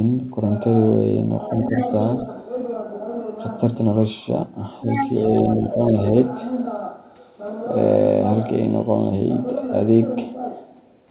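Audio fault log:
1.76–1.91 s and 4.81–5.10 s, other side's voice leaking through: A second voice slips in under the talker, faint at first (roughly 15 dB down) and then nearly as loud, only a few dB below, in the later burst. The likely cause is loudspeaker playback reaching the microphone and surviving echo cancellation. On a spectrogram, extra harmonic stripes appear that don't follow the talker's pitch, all cut off at the same 4 kHz ceiling as the rest of the narrowband audio.
5.29–5.93 s, speech suppressed in double talk: Right after the louder leak, the talker's level sags in patches, losing a few dB at worst and about a third of a second in total across the span, so the voice sounds briefly ducked. This is likely the echo canceller clamping down while both sides overlap and failing to tell its own talker from the echo. The waveform envelope shows shallow notches.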